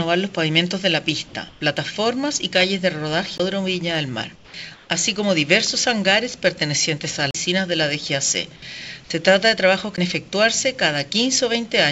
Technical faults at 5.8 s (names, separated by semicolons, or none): none